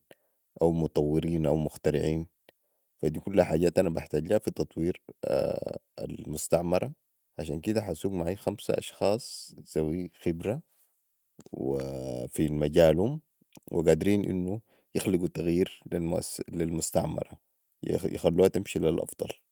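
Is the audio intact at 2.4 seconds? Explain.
Yes, at 2.4 seconds the speech plays through cleanly, with no dropout, click, distortion or other break in the sound.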